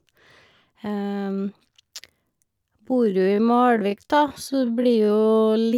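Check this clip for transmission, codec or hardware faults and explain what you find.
One fault is present: a time-stretched section running from 2.78 s to the end of the speech. The likely cause is software stretching that stretch of audio to fill a set length while holding pitch, done by repeating short slices of the signal. Here it runs at about 0.59 times normal speed, so the pace drops abruptly while the pitch stays put, and the slowed speech drags.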